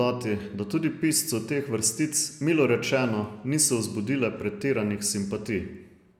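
No technical faults can be heard anywhere in the speech recording.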